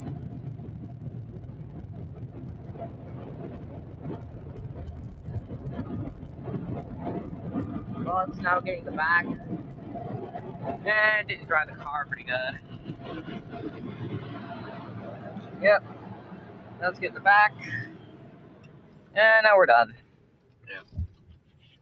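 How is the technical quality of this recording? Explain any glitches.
The recording's quality is reduced by one fault that runs through the whole clip. It sits on top of a call-style signal chain whose content stops at 8 kHz, consistent with a wideband call codec.

From start to finish, a speech-tuned noise suppressor is applied to sound it was never meant for. It treats sustained tones, ambience and decay tails as noise and pulls them down, while sharp onsets pass mostly intact. The level therefore swings by around 15 dB, and the sound pumps and thins as it sustains. On a waveform, the envelope shows this as bursts that collapse quickly after each attack. On a spectrogram, sustained bands and reverb tails look broken and patchy, fading in and out instead of decaying smoothly.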